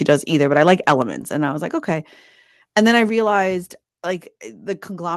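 At 1.02 s the speech and background both drop by about 4 dB in a single step. This is a microphone volume stepped down event, likely the call software lowering the device's input volume after judging the signal too hot.

From 2.77 to 2.97 s there is microphone overload. Peaks exceed the converter's ceiling by about 1 dB, and a small fraction of samples have their tops flattened, giving the loudest syllables a brief harsh, crackling edge. The likely cause is input volume set too high.

Just after, at 3.09 s, the level steps down again, by about 5 dB. The same automatic input adjustment is likely reacting to the clipped peaks just before, so this second drop likely follows from the distortion.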